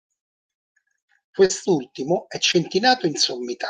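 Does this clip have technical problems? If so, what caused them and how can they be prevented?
Yes. The speech briefly smears at 1.45 to 1.51 s and again at 2.51 to 2.55 s. This is short concealed packet loss: about 40 ms and then 20 ms of audio arrived too late, so the decoder stretched the preceding sound across each gap before blending back. A larger jitter buffer or forward error correction on the network link would prevent it.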